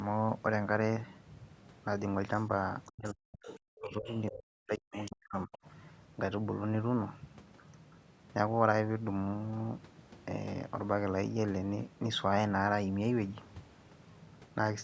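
From 2.38 to 2.45 s a faint second voice, the other side's voice leaking through, sits roughly 35 dB under the talker. It returns more strongly from 2.86 to 3.12 s, 3.45 to 3.58 s and 4.09 to 4.31 s, reaching about 15 dB down, and again from 4.92 to 5.11 s and 5.52 to 5.68 s at about 20 dB down. This is likely loudspeaker sound the echo canceller failed to remove. On a spectrogram these stretches show as weak, broken harmonic traces that do not line up with the main voice's patterns.

Overlapping these leaks, from 2.9 to 4.12 s and from 4.3 to 5.52 s, the talker's own voice is speech suppressed in double talk. The level dips sharply, in places by as much as 40 dB, and the voice is affected for about a second in each span. This was likely the canceller ducking everything while both sides spoke at once. The waveform shows the envelope carved into gaps and troughs, and the spectrogram thins to near-blank patches within a band that stops at 8 kHz.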